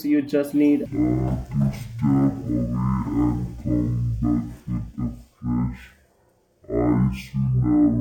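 Stereo read as mono sets in at 0.86 s, right after "you just", and lasts to the end of this speech clip, with "know what you might" as the following landmark. Interleaved left and right samples are read in sequence as one channel, so the audio plays at 0.5× speed, 12 semitones (an octave) low, with a fainter mirrored image in the upper half of the spectrum.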